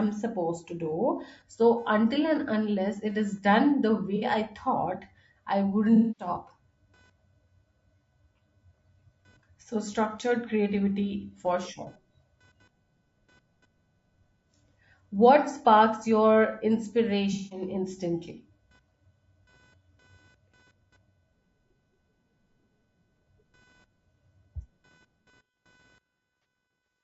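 Speech, with a faint buzz running underneath the whole way, pulsing at around 500 Hz and sitting far below the speech. That's computer activity noise: processor, graphics or mouse load shifting the shared ground, so it follows the machine's workload rather than the talking. The speech itself has a rough, grainy edge throughout, with noise creeping in between the harmonics and a thin, synthetic top end. That's most likely low-delay AAC compression (AAC-ELD) at a fairly low bitrate. On top of that there are four AAC frame losses with concealment, where the decoder patches the gap from the last good spectrum: short ones at 4.16 to 4.24 s and 26.42 to 26.45 s, plus longer ones at 5.96 to 6.28 s and 17.33 to 17.62 s, which come across as smeared, phasey patches.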